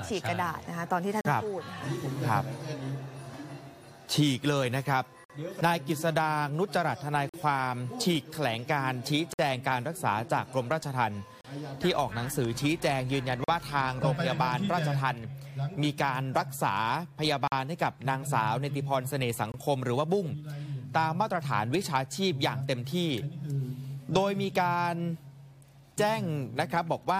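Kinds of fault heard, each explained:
Gap between stream segments: Timestamps of neighbouring stream segments fail to meet, so the player fills the gap with silence. Hard-edged holes of 22 to 55 ms cut the sound at about 2-second intervals, matching 2-second segments. No audio is lost; silence is added.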